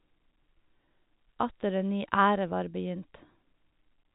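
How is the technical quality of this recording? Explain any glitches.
The technical quality is sound, with no glitches to explain in this telephone-band speech recording.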